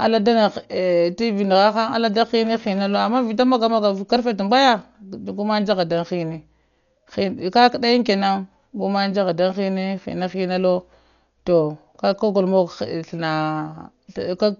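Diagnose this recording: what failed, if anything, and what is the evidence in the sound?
The failure is at the codec stage, and it runs through the whole recording. The speech is dull, with nothing above 6.9 kHz. Steady voiced sounds carry a rough, fluttering noise around them. The damage is heavy. The likely cause is Dolby Digital compression at a very low bitrate, which fits about 48 kbps. Starved of bits, the encoder narrowed the band and left many frequency lines without detail. The decoder then filled those lines with noise.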